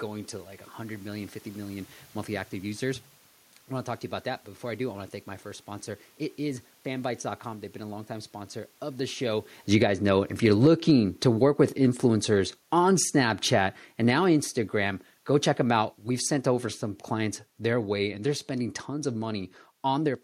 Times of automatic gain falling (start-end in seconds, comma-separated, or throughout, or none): 9.59-16.37, 17.12-20.19